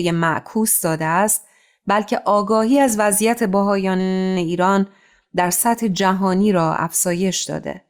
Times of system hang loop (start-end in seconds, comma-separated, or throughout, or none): 4.00-4.37